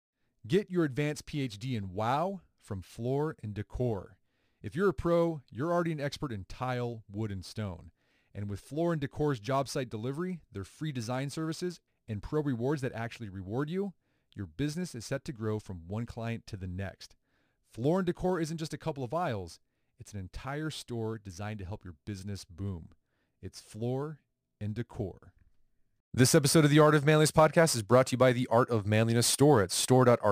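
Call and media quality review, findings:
Crude rate conversion throughout the speech clip: sample-rate change done by dropping samples with no anti-alias or interpolation filter. The grit points to a 48 kHz to 44.1 kHz step. Periodic discard error sits about 25 dB below the signal, producing inharmonic fizz and buzz from shifted copies of the speech, riding on louder and brighter passages. Probable component: resampler in the capture or playback path.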